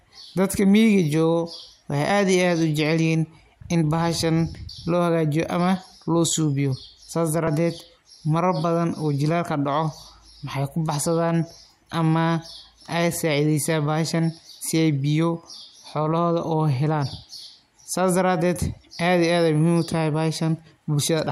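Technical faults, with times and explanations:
4.66–4.69 s and 7.47 s, damaged data in a compressed stream: the first is a brief disturbance between "in bahashan" and "loo hagaajiyo ama loo", the second a shorter one. Corrupted bytes made the decoder misread frames and lose sync until it found the next valid frame header.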